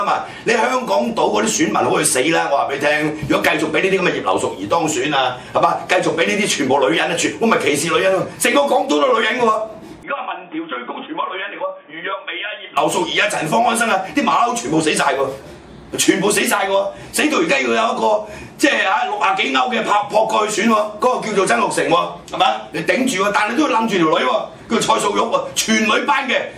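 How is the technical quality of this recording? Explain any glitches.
One glitch affects the recording, from 10.03 to 12.77 s. The sound abruptly turns dull and boxy, with nothing above 3.6 kHz, drops roughly 10 dB, and gains a faint new noise floor, then clears. The input was likely switched to a poorer device. A plain filter would change only the tone, not the level and background noise together.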